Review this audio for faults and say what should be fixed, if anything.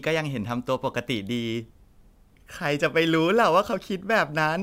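Sample clock jitter runs throughout the speech. Timing errors of a few microseconds add hiss about 30 dB down, rising on loud, bright sounds. Fix it with a clean, stable converter clock.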